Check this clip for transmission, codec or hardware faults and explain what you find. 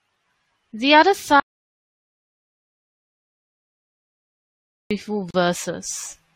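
Two faults are audible in the speech: a long dropout to silence early on and a brief gap at a join near the end.

Audio dropout to silence, 1.40 to 4.91 s. The speech stops mid-flow and the next 3.5 s or so are dead digital silence, with no room tone or background hiss, until it cuts back in just as abruptly. The input was likely lost for that stretch, through a disconnected device, a broken link or an accidental mute, while the recorder kept writing silence. Whatever was spoken during that time is gone.

Gap at a join of encoded pieces, 5.31 to 5.34 s. A short hole of about 37 ms opens in otherwise continuous speech, and the voice then resumes exactly where it left off. The edges are smeared by the codec. This happens when separately encoded segments are spliced without trimming: one encoder's start-up delay and the other's padded final frame both remain as silence at the seam.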